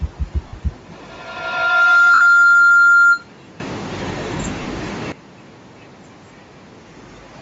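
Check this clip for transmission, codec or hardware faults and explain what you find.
Three problems show up here.

Throughout the speech there's a grainy, breathy edge on the upper range, with the top end thinned out and filled with hiss. That's most likely Bluetooth LC3 compression running at a low rate, something like 32 kbps, where the codec drops high-frequency detail and pads it with noise.

There are lost LE Audio frames at 0.48 to 0.53 s (50 ms), 2.14 to 2.21 s (70 ms) and 4.62 to 4.65 s (30 ms). At each one the decoder keeps replaying the last spectrum with scrambled phase, so the sound smears into a brief noisy blur. The lengths fit 10 ms frames.

From 0.91 to 3.39 s there's a feedback howl. Two devices on the same call in one room form a loop that gains level on every pass, so the tone narrows to around 1.5 kHz. It climbs to about 13 dB above the speech, with the loop repeating roughly every 150 ms.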